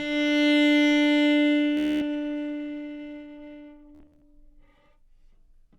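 Bluetooth stutter hits around 1.77–2.02 s, then again at 3.95–4.22 s, choppier that time. Late packets make the receiver loop a tiny slice into a machine-gun buzz before the sound jumps ahead.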